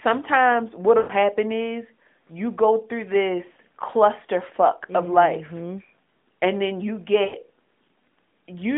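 Lost AMR speech frames at 0.98–1.13 s, before "is you go through", and 7.24–7.36 s, after "and then you": the narrowband decoder stretches the last good frame, smearing and fading the sound for 120 ms and 100 ms.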